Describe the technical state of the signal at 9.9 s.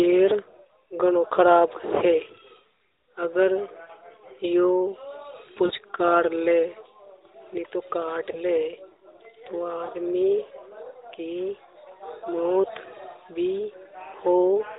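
Right around there, from 9.86 to 9.91 s, there's a lost AMR speech frame, a single 20 ms frame that failed its check. The decoder papered over it by reusing the previous pitch and vocal tract settings at lower gain, so you hear a brief dip or warble in the narrowband speech.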